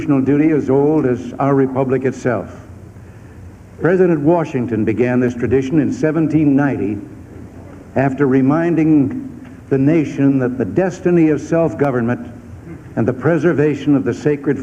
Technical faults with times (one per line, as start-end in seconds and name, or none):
5.28 dropped samples
10.76 dropped samples
11.85 dropped samples